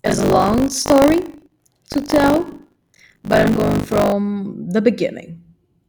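From the start to 4.12 s, the speech has buffer tearing. Writer and reader have slipped inside the ring buffer. Most of each buffer replays audio roughly 40 ms old, with hard joins on both sides. This gives a steady 50 Hz robotic rattle.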